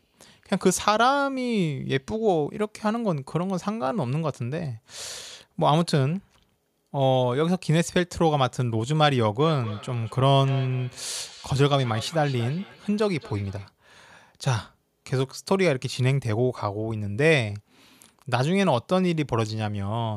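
From 9.4 to 13.71 s you get feedback echo between two devices: a second device on the same call is replaying this mic's audio, and it gets picked up again. The repeats come back about every fifth of a second, peaking at about 17 dB below the speech.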